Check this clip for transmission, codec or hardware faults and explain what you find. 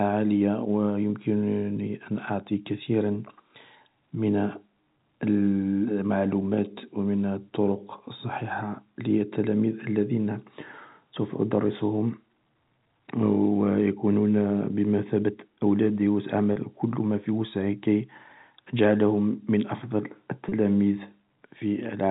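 Two brief gaps in the speech show packet loss with pitch repetition, at 16.53 s and 20.49 s, each lasting about 30 ms and pointing to a single lost packet. The receiver filled each hole by looping the last pitch period, so instead of a silent dropout or a click there is a short, slightly held, buzzy tone before the speech resumes. Both losses are too brief for the fade into silence to be heard. The speech passes through G.711 A-law telephone coding, with its 4 kHz band limit.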